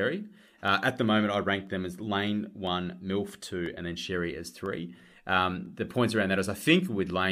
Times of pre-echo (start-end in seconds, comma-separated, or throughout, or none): none